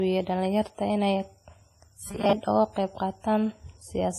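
Throughout the speech, the audio carries the smeared, swirly texture of a heavily compressed source and has nothing above 15.3 kHz, even though it is packaged as a high-bitrate MP3. This is likely low-bitrate audio saved at a high bitrate. The sound points to an earlier pass through a very low-rate codec, something near 24 kbit/s WMA, then re-encoding at around 192 kbit/s. The larger file cannot restore detail the first encoder had already thrown away.

From 2.04 to 2.34 s, the speech turns into a rigid, metallic buzz at 200 Hz. It still roughly tracks the syllables. This is robotic sound from repeated short buffers: audio arrived too slowly, so playback looped the last few milliseconds. A 200 Hz buzz fits a 5 ms repeat. Most of the segment is repeated material rather than real audio.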